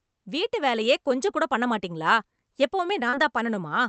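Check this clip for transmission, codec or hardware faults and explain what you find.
One transmission fault is audible, late in the speech.

Short concealed packet loss at 3.09 to 3.15 s: about 40 ms of audio arrived too late, so the decoder bridged the gap by extending the preceding sound for 33 ms, then blended back into the real signal. The result is a brief smear or wobble.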